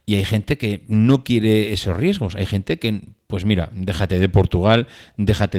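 No technical faults can be heard in this speech; it carries only the light colouring expected of Opus voice coding in its hybrid mode, with the full audio band retained, which fits a bitrate of around 20 kbps.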